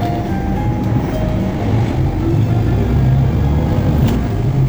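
Sounds, with a time-stretched section from 1.49 s to the end, where events hurry along at about 1.86 times normal pace. Pitch stays put, unlike a plain speed-up, so likely software dropped short slices to squeeze this stretch.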